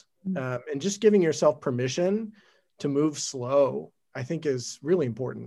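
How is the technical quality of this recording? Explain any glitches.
No glitches can be heard anywhere in this speech recording. There is nothing in it that needs explaining.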